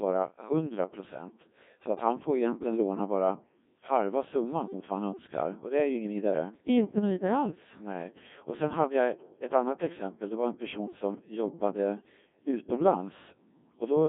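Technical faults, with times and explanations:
Throughout: Codec 2 vocoder, likely at 1.6 kbit/s, rebuilding speech from pitch and envelope as sine waves, so it sounds robotic and buzzy, band-limited to 200 Hz–3.6 kHz.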